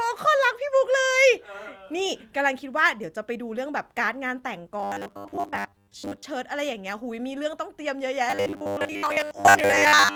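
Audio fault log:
4.80 to 6.23 s and 8.30 to 10.16 s: robotic sound from repeated short buffers. The speech becomes a rigid metallic buzz at 100 Hz that loosely tracks the words. A 10 ms slice is likely being replayed in place of most of the missing audio.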